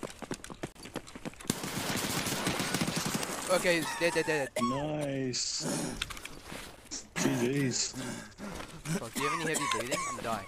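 A gap between stream segments opens at 0.72 s, where the sound drops to silence for about 32 ms before resuming, and again at 6.77 s, this time a much briefer hole of a few milliseconds. In each case the timestamps of two consecutive segments failed to meet, and the player filled the missing stretch with silence. The edges are abrupt. The two holes sit 6 s apart, which fits 6-second segments, and no audio is lost.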